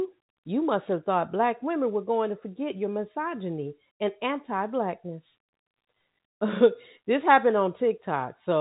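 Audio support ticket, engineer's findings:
No faults found in this speech.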